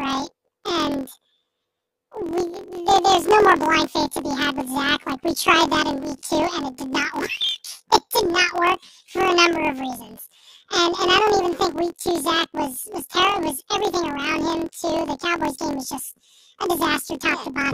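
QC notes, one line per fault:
Throughout: planar audio read as interleaved; each 23.2 ms block plays left then right at double speed, so speech sits an octave high with a 43 Hz flutter.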